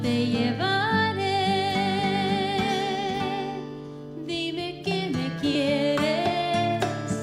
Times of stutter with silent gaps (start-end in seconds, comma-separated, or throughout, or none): none